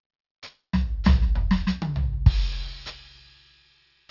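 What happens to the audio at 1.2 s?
At 1.2 s, as throughout the music, aliasing is present: the audio was resampled down without an anti-alias filter, folding content above about 6 kHz (which fits a 48 kHz to 12 kHz drop) back into wrong pitches roughly 25 dB below the music, making the highs gritty and metallic.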